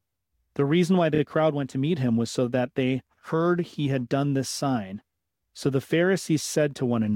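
From 1.14 to 1.19 s come repeated frames: a short block of about 16 ms plays twice more, adding 52 ms. It sounds like a quick stutter. Unlike a dropout, no sound is lost or silenced.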